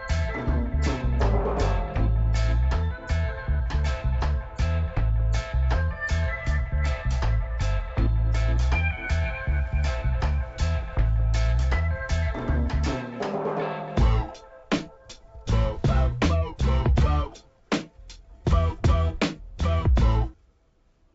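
No technical faults are audible.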